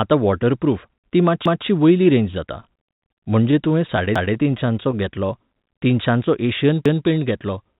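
At 1.46 s, ending at 1.66 s just before "वयली रेंज जाता", the first overlapping chunks fault appears. Each chunk begins 200 ms before the previous one ended, so that stretch plays twice. The chunks are 2.5 s long, and the fault returns at 4.16 s and 6.86 s, as a stutter with a click. A waveform shows a duplicated 200 ms segment at each join.

From 2.6 s to 4.95 s, right after "वयली रेंज जाता", repeated stalls (stutter) drag the speech. The jitter buffer kept running dry, and the receiver stretched the last sound across many brief gaps, the longest about 50 ms. Nothing is lost, but a spectrogram shows short smeared, frozen patches amid the speech.

At 6.46 s a loudspeaker feedback squeal begins and lasts to the end. A loop through speaker and microphone exceeds unity gain at 4.2 kHz. That tone swells within about a third of a second to a few decibels above the speech. On a spectrogram it is a bright horizontal line sitting just above the 4 kHz ceiling of the G.711 call path.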